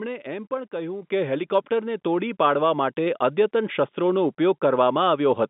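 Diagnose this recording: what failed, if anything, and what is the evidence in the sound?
Microphone volume stepped up at 1.02 s, just before "કે હેલિકોપ્ટરને", by about 7 dB, then at 3.06 s, before "અદ્યતન શસ્ત્રોનો", by about 1 dB. In call processing, software judged the microphone too quiet and raised its input volume abruptly, lifting speech and background together.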